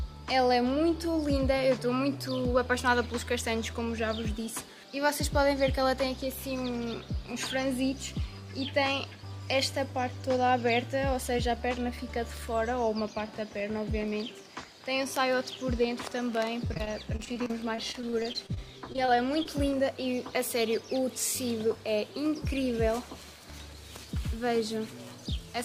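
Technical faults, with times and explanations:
16.67–19.47 s, repeated packet loss (robotic sound): 21 short gaps, none longer than 26 ms, land close together over this stretch. Each hole is patched by stretching the sound just before it, about 13% of the span in all, so the audio turns choppy with pieces missing. Unlike a single dropout or a plain mute, the breaks keep recurring and are papered over by repeated fragments rather than falling to silence.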